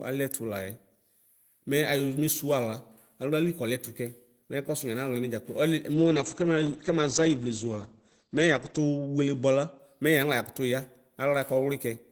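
A speech clip with a call bitrate drop from 5.95 to 9.85 s: the encoder falls from 32 to 10 kbps, bottoming out for about 2.8 s, and the audio band shrinks from 20 kHz to 8 kHz. The voice turns coarse and muffled. A spectrogram shows the upper band sharply emptied above 8 kHz, then restored.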